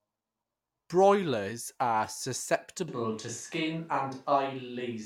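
At 2.88 s the speech turns abruptly roomy and hollow, with thinner bass, and stays so to the end: likely a switch to a distant microphone. Loudness barely changes, but room noise rises to roughly 35 dB below the speech, which added reverb alone wouldn't bring.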